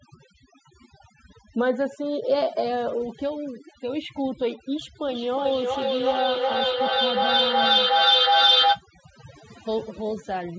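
From start to finish the background sits at near silence with twinkling specks. That is overdone noise removal: the reduction was set so strong that frequency bands close to its noise estimate were pushed down or off, taking quiet parts of the voice with them.

From 5.08 to 8.85 s each word comes round again roughly every 400 ms, thinner and more ringing each time, and the repeats pile up instead of fading, peaking about 7 dB above the speech itself. This is feedback echo between two devices. One device played what the other's microphone sent, that microphone picked it up again, and neither echo canceller could remove sound played by the other device. Through all of this the call microphone processing limits the audio to nothing above 8 kHz.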